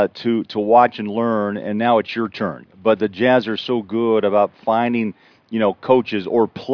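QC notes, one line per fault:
Nothing to flag on this speech clip; no technical faults turned up anywhere in it.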